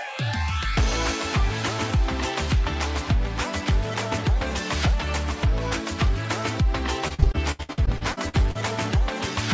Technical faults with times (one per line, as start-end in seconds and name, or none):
7.08-8.57 repeated packet loss (robotic sound)